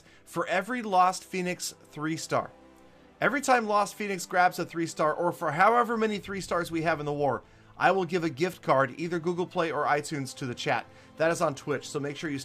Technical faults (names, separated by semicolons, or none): none